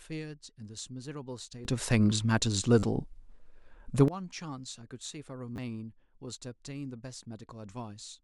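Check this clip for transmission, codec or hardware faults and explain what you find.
Two kinds of fault are present in this speech clip: a sudden gain jump and two repeated-buffer stutters.

From 1.65 s to 4.08 s there is a sudden gain jump. The level rises by about 18 dB in one step and drops back just as abruptly at the end. Speech and background noise move together, so the noise floor lifts with the voice. There is no fade at either edge. The likely cause is a digital gain setting applied without a ramp.

A repeated buffer occurs at 2.79 to 2.83 s, inside the louder section. The same tiny slice plays four extra times in a row, which points to a 10 ms buffer. A second one at 5.56 to 5.58 s repeats twice more. Each join is hard, so these come across as brief buzzy stutters rather than clear echoes. Around 40 ms and 20 ms of new audio are lost there.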